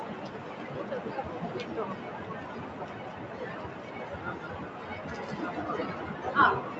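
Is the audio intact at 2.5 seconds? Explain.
No. At 2.5 seconds, as throughout, sustained sound and tails sink by roughly 5 dB while attacks pass, so the audio pumps and thins. This is a noise suppressor applied to music or sounds: a speech-tuned suppressor treats steady tones and ambience as noise and turns them down.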